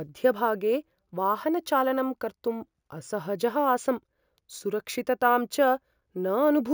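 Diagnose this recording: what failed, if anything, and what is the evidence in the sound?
Imaging from sample-and-hold upsampling at the sample-rate conversion stage runs through the whole speech clip. A metallic fizz about 22 dB below the speech fills 8 to 16 kHz, which fits 16 kHz audio whose samples were simply repeated to reach 48 kHz. Unlike codec or hiss artefacts, it rises and falls with the speech and moves opposite to the pitch.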